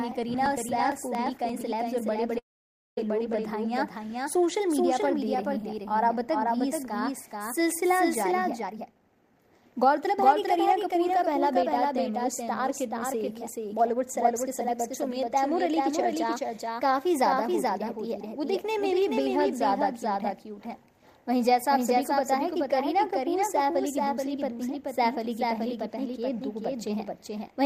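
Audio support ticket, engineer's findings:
Doubled audio track, throughout. Likely a second capture path or misaligned edit mixing the same signal in twice. Full-band copy trails by roughly 400 ms at about 5 dB down, dry, no decay, so every event gets a distinct, flat echo.

Periodic USB or driver dropouts, 0.12–1.72 s. Background task stalling the bus or driver every 0.115 s; around 10 ms of audio skipped each time, some fifteen losses. Heard as an evenly spaced ticking train over the signal, stopping after 1.72 s.

Call audio freeze, 2.38–2.98 s. Packets likely held up, jitter buffer ran dry; receiver stretched the last sound briefly, then silence for about 0.55 s, 587 ms inserted in total. Playback resumes where it stopped, nothing lost, everything after pushed later.

Jitter buffer speed-up, 8.62–11.72 s. Buffer overfilled, likely after delayed packets landed together; receiver cut short pitch-period chunks repeatedly to shed delay, roughly half a second removed. 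Audio runs at 119% speed, pitch unchanged, sounding rushed through that stretch.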